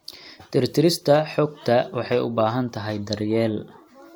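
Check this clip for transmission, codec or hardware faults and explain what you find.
Checking this clip turns up no faults.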